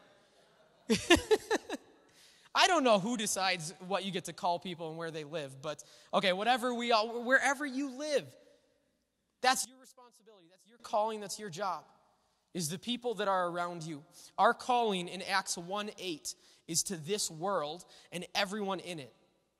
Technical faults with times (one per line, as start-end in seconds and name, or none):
9.65-10.80 one channel inverted